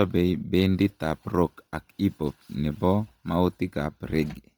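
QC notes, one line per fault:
Throughout, Bluetooth LC3 compression: the speech carries a heavy breathy, grainy edge, with the upper frequencies sounding hissy and smeared rather than crisp, though the band still reaches about 20.1 kHz. This is likely LC3 coding at a low bitrate, which fits roughly 32 kbps. With 10 ms transform frames, much of the upper spectrum is zeroed and refilled with noise, producing that synthetic, gritty texture over the speech.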